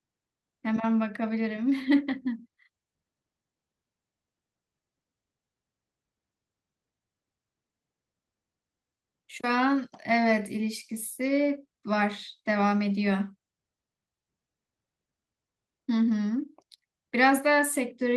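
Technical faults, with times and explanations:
No technical faults found in this speech; the WebRTC call path is working normally, with the band topping out near 12 kHz as expected for Opus at the rate it appears to be running.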